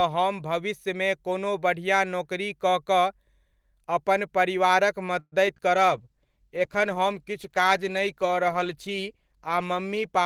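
At 5.19 s, just after "अपन परिवारक", repeated packet loss (robotic sound) begins and lasts until 5.61 s. Packets went missing or arrived late four times in quick succession. The receiver covered each hole by stretching the last bit of speech, about 150 ms in total, and roughly 60 ms is simply absent. The longest gap is about 126 ms. Over a third of this short stretch is patched sound. The speech turns choppy, with pieces dropped.

From 5.75 s to the end, a call bitrate drop sets in. The network's bandwidth estimate fell, so the encoder had far fewer bits to work with. The sound points to a fall from around 48 kbps to around 14 kbps. The low point holds for about 3.65 s. Speech is coded more coarsely. High frequencies are cut away. The voice sounds muffled through the rest of the clip.

Overlapping that, from 5.85 s to 6.51 s, comes a jitter buffer slow-down. The buffer needed more reserve. 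To build it, the receiver repeated single pitch periods and fragments of pauses. About 40 ms of extra audio was inserted. Playback runs at roughly 95% speed while the pitch stays the same. Sounds are drawn out.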